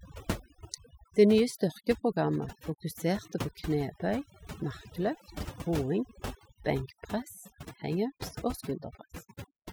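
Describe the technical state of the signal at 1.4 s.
The background sounds lowered and twinkling: overdone noise removal, present throughout, cutting bands near the noise estimate and quiet speech detail with them.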